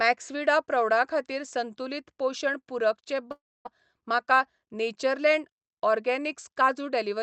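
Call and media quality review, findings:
Long network dropout, 3.31–3.67 s, right after "पोशण पूरक चे": speech smeared into a fading buzz, then about 250 ms of silence; resumes with roughly 340 ms missing. Likely jitter-buffer starvation with concealment. Unlike a brief packet-loss click, this shows a long fade and a gap.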